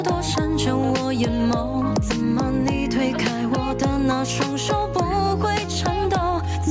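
Gain pumping runs all the way through: the gain swings by around ten decibels under loud moments, likely from a fast limiter chasing overly high gain.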